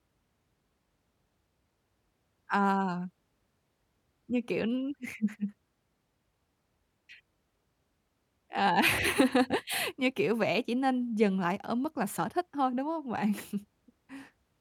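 No technical faults can be heard anywhere in this speech recording.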